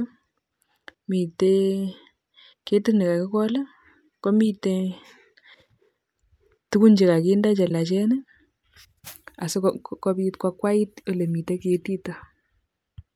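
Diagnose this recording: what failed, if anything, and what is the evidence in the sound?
Damaged data in a compressed stream at 7.67 to 7.71 s, right after "tugun che kakinde che", is a codec-stage failure: a brief blip in the speech where corrupted bytes made the decoder misread frames, lose sync, and hunt for the next valid frame header.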